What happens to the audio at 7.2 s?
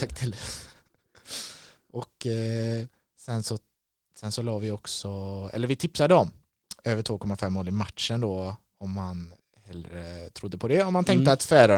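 Nothing goes wrong at 7.2 s: the speech carries on intact through the Opus voice compression, with no dropout, click or distortion at that point.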